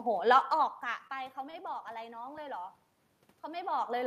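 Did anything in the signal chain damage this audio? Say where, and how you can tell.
Yes, twice, both at the network stage of the call. From 1.07 to 1.11 s there is short concealed packet loss: about 20 ms of speech never arrived, and the receiver covered the hole by extending the preceding sound for roughly 15 ms before blending back in. You hear a brief smear or wobble, and whatever sat in that gap is gone. That loss is what separates it from a stall, which keeps all the content.

From 1.51 to 1.55 s there is a short stall from a late packet: the jitter buffer ran dry, so the last sound was stretched for about 25 ms until the packet turned up, and playback then resumed exactly where it left off. Nothing is missing, but one sound is held too long with a faint buzz or dip, and everything after it is about 25 ms later. The level shifts near 0.5 and 3.5 s come from the talker's distance to the microphone, not from the chain.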